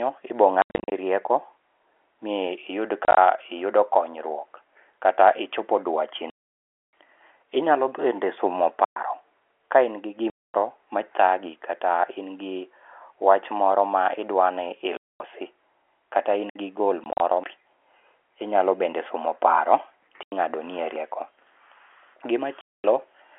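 From 0.62 to 0.92 s, 3.05 to 3.17 s and 6.3 to 6.93 s, packet loss filled with silence chops the speech. Holes come in steps that fit 10 ms packets, with the longest solid gap at 6.3 s. Each appears as a flat near-silent gap in the waveform and a blank vertical slot in the spectrogram, with hard edges.

At 8.85 to 8.96 s (about 114 ms) a digital wireless dropout mutes the link through a very short fade. It leaves a clean near-silent hole with no noise burst on either side, seen as a tapered gap rather than a sharp cut.

Packet loss gaps return at 10.3 to 10.54 s and 14.97 to 15.2 s.

A second wireless dropout, about 63 ms, falls at 16.49 to 16.56 s.

Further packet loss gaps come at 17.04 to 17.2 s, 20.23 to 20.32 s and 22.61 to 22.84 s. Through all of them, the telephone-band G.711 coding keeps everything under 4 kHz.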